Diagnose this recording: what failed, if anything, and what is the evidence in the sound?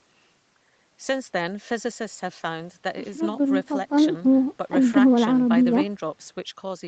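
Nothing failed here: the speech simply carries the ordinary marks of a call path, with the call's microphone processing and codec leaving nothing above 8 kHz, which is just how that route normally sounds.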